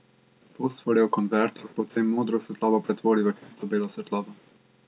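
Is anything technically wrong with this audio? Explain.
No, nothing technically wrong can be heard here.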